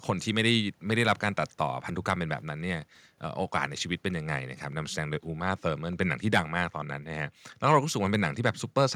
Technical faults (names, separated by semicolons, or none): none